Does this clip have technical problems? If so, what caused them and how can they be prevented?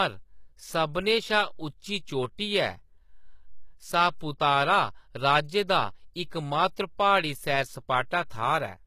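Yes. Throughout, the speech treble sounds synthetic, with gritty, lispy s sounds and nothing above 14.9 kHz. This is likely HE-AAC compression, where copied lower bands replace real treble. The strain fits a bitrate near 20 kbps. Encoding at a higher bitrate with plain AAC would prevent it.

Pre-echo appears at 4.19 s, 6.30 s and 8.30 s. A brief hiss of 18, 13 and 12 ms comes before each attack, softening it. Block-spread quantisation noise leaks ahead of each attack. More bits or shorter transform blocks would prevent it.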